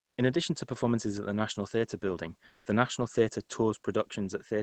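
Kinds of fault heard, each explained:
Comfort noise in place of the background: From 2.47 to 2.65 s, a 180 ms pause loses its natural room detail and turns into a smooth, featureless hiss, about 5 dB quieter than the real background, which already sits about 36 dB below the loudest speech. The likely cause is discontinuous transmission in the call codec: with no speech detected, sending paused and the receiver filled the gap with synthetic noise until speech resumed.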